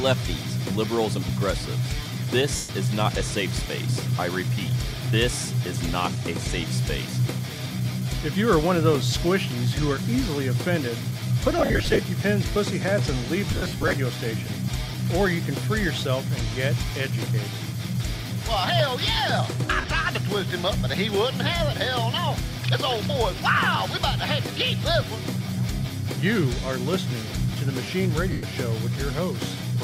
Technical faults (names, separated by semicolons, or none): lost LE Audio frames